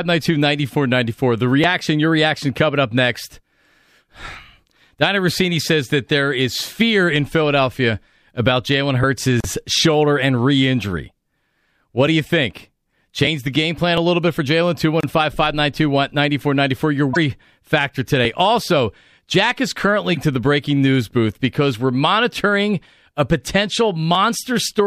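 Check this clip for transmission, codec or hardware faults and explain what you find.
Two brief codec faults disturb the speech. Damaged data in a compressed stream occurs at 17.13–17.17 s and again at 20.13–20.17 s: corrupted bytes make the decoder misread the affected frames and lose sync until it finds the next valid header, producing a short glitch of about 40 ms each time.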